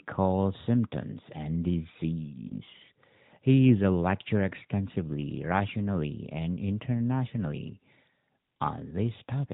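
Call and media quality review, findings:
Lost AMR speech frames, 2.48 to 2.52 s: brief dip, about 20 ms, single frame. Decoder concealment reused the last good pitch and vocal tract parameters at reduced gain after a failed frame checksum. Same at 4.92 to 4.96 s, between "is a lecturer" and "rationally and internationally": short dip, one 20 ms frame concealed the same way. Both occur on an AMR narrowband path, band-limited below 4 kHz with light coding roughness consistent with 12.2 kbps mode.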